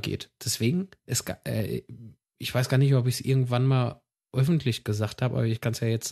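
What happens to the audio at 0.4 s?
At 0.4 s the audio plays cleanly, with no dropout, click, distortion or other fault at that moment.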